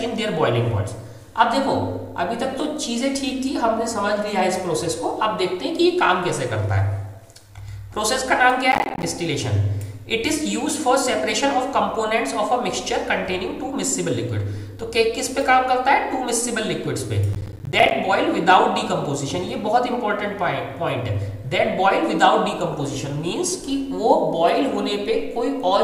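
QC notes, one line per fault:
8.72–9.03 s and 17.33–17.91 s, processor overload crackle: in each burst the audio is chopped by a rapid string of tiny silent gaps with hard edges, around twenty of them, each about 10 ms long, which fits a processor repeatedly missing its buffer deadlines. Unlike a single dropout, the gaps come in a dense cluster, giving a gritty tearing texture. Unlike clipping distortion, the crackle does not follow the signal level, and it stops abruptly once the load clears.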